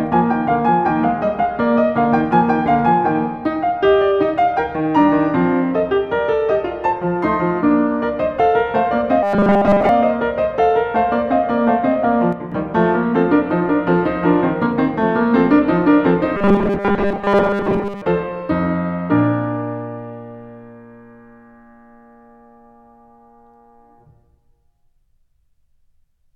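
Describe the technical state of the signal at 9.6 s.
The playback likely ran short of incoming audio between 9.23 and 9.89 s, so it looped its last few milliseconds while most of the real music was skipped. This is robotic sound from repeated short buffers, a rigid, metallic 200 Hz buzz that fits a 5 ms repeat.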